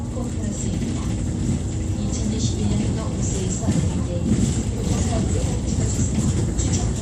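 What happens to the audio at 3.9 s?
Nothing goes wrong at 3.9 s; the audio runs through that moment intact, with no dropout, click or other technical fault.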